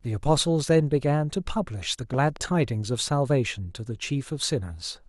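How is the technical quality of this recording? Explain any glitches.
There's one glitch: a loud pop, actually two in quick succession, between 2.14 and 2.38 s, roughly 10 dB above the speech. It's likely a voltage spike from a plug, switch or static, with the speech carrying on underneath.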